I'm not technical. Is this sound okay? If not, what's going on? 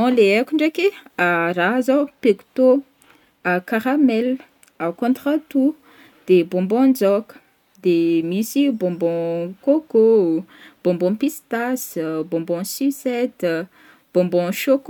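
Yes, this one's fine, and there's nothing wrong with the recording that you'd need to worry about.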